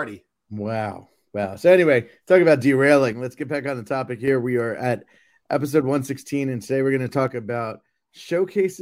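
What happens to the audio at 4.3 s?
One channel drops out from 3.13 to 4.28 s, just after "anyway talking about", likely a lost stereo channel, so the mono sum falls abruptly by about 6 dB.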